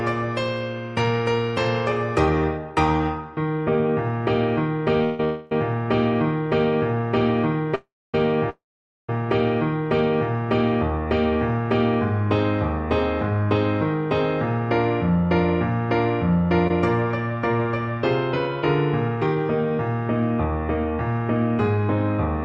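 Call audio freezes occur at 5.04 to 5.20 s, 5.24 to 5.52 s, 7.75 to 8.15 s and 8.50 to 9.09 s. Each is likely caused by delayed packets draining the jitter buffer. A fading buzz stretches the last sound, and the last two freezes decay into flat silent stretches of about 0.27 s and 0.49 s on the waveform before the audio resumes where it stopped.

A short stall from a late packet at 16.67 to 16.71 s holds one sound about 23 ms too long. It shows as a brief smeared, repeated band on the spectrogram.

A jitter buffer speed-up from 19.08 to 19.36 s plays at 112% speed with unchanged pitch. A few tens of milliseconds are removed, compressing that stretch of the waveform, all below the Opus call path's spectrogram ceiling near 12 kHz.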